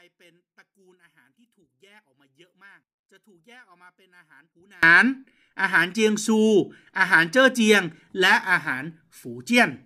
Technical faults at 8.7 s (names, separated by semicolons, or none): none